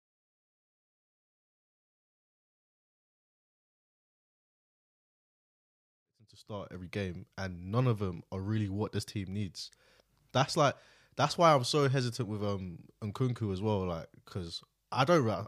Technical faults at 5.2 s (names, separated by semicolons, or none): none